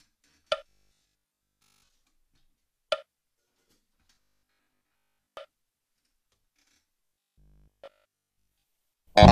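From 0.69 to 1.89 s, 4.15 to 5.37 s and 7.06 to 8.64 s, the sound turns into a rigid metallic buzz at 50 Hz. This is robotic sound from repeated short buffers, likely 20 ms chunks looped over skipped audio. The last stretch repeats throughout.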